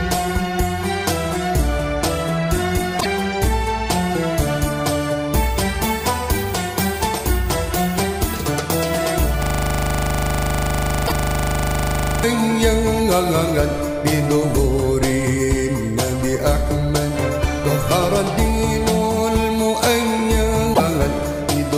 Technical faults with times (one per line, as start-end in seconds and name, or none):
2.97-3.06 damaged data in a compressed stream
9.43-12.24 system hang loop
11.04-11.12 damaged data in a compressed stream
20.70-20.80 damaged data in a compressed stream